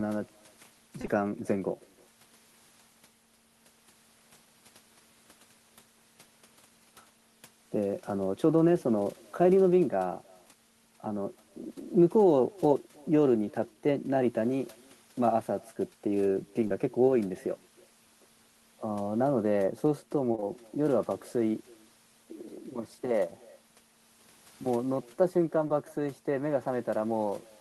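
Throughout this speech recording, every phrase is trailed by a faint, thin repeat arriving roughly a third of a second later, sitting about 28 dB below the talker. That is echo with no canceller: the far end is playing the call through a loudspeaker, its microphone is picking that playback up, and nothing is subtracting it, so the talker's own audio returns after the network round trip. The fairly long delay keeps the shadow distinct instead of blending into it, and its low level makes it a ghostly tail rather than a loud doubling. On top of that, short concealed packet loss produces brief smears and wobbles at 1.01 to 1.05 s and 1.05 to 1.09 s, at 16.67 to 16.72 s, at 20.32 to 20.35 s, 20.35 to 20.40 s and 20.40 to 20.44 s, and at 25.68 to 25.71 s. Each is about 20 ms of missing audio that the receiver patched by extending the preceding sound before crossfading back into real signal. Where several of these gaps fall back to back, around 1.0 s and 20.3 s, the patch stretches longer.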